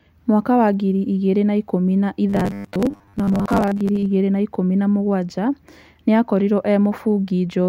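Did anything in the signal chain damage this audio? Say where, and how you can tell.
Yes. Right after "igĩrĩ na ikũmi na", from 2.30 to 4.06 s, the speech goes to robotic sound from repeated short buffers: a rigid metallic 100 Hz buzz until "igĩri na ikũmi na". That likely points to a starved buffer replaying about 10 ms chunks, with roughly half the audio repeated.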